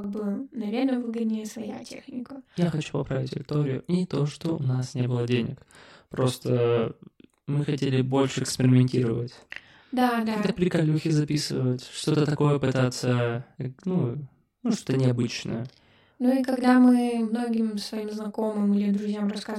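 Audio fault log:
Throughout, channel delay (doubling): one channel of the speech arrives about 40 ms behind the other, and when the two are folded down to mono the late copy doesn't blend in as a comb-filtered colouration. At 40 ms the gap is long enough for the ear to separate it, so every syllable is followed by a second copy at the same level, heard as a thickened, doubled sound bordering on a tight slapback echo.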